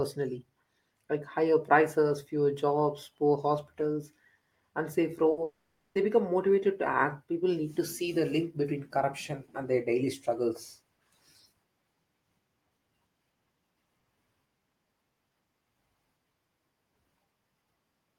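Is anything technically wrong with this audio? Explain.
Yes, the speech has two closely spaced gaps.

Burst of packet loss, 5.31 to 5.39 s: a few consecutive packets never arrived in time, so the receiver stretched the preceding sound across them, fading it out. About 60 ms of speech is replaced by a brief fading continuation of the last sound, and the speech then resumes further on.

Long network dropout, 5.43 to 5.97 s, likely from the stream stalling entirely: the receiver keeps extending the last sound as a fading buzz or hiss, and the final roughly 0.3 s decays to silence. About half a second of speech is lost before it returns at "become motivated to act".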